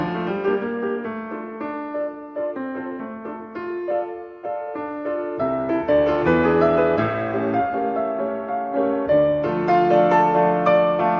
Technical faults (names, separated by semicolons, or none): none